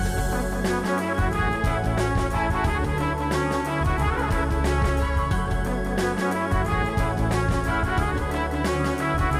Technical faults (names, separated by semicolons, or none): doubled audio track